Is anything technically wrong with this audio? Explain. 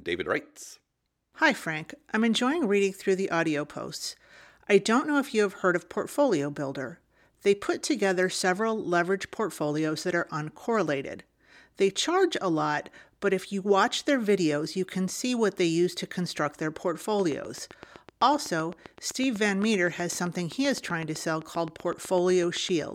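Yes. From 17.2 to 22.8 s, after "use to construct their", a regular train of clicks runs at 7.8 per second, roughly fifty sharp pulses peaking above the speech, likely interference from nearby equipment.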